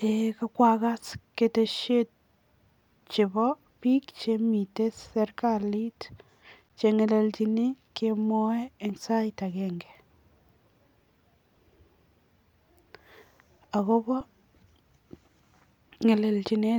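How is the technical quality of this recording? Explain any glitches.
The speech has two brief freezes, at 6.69 s just before "che ngelelchini kemwoe eng" and at 14.21 s. Each is a flat, held stall of about 12 ms and 5 ms, with the sound stopping almost without a click. These are underruns with held sample: the output buffer ran dry and the converter held its last value. The first gap fits a 512-sample buffer. Playback then resumed where it had paused, with nothing lost, so each restart is soft.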